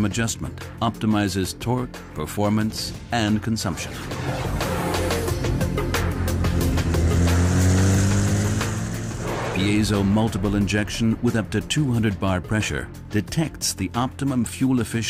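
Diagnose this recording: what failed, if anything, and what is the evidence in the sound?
Nothing failed; no fault is audible anywhere here.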